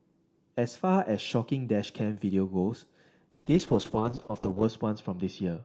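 From 3.31 s to the end at 5.65 s, the speech suffers a call bitrate drop. The Opus call path, which until then carries full 8 kHz bandwidth, is pushed into much coarser coding. The roughness and muffling point to a fall from around 32 kbps to about 7 kbps, held at its lowest for 1.33 s. Unlike packet loss, there are no gaps or glitchy repeats. The speech stays continuous but turns watery and dull while the highs vanish.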